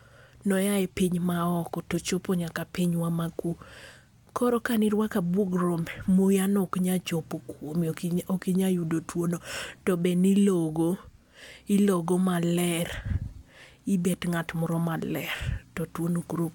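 No technical faults can be heard anywhere in the recording; the signal holds steady throughout.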